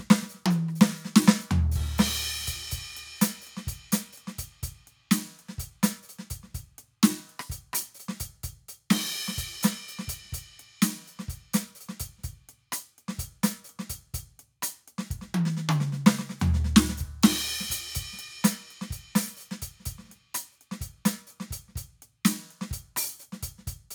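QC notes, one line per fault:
No faults are heard in this music clip. Nothing in it needs a QC note.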